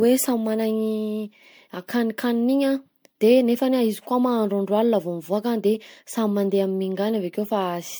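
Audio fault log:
throughout generation loss: the speech sounds swirly, hollow and smeared, with blurred consonant attacks, though the band still extends to 20.1 kHz. The likely cause is repeated MP3 encoding, around seven passes near 97 kbit/s, each requantising on a shifted frame grid.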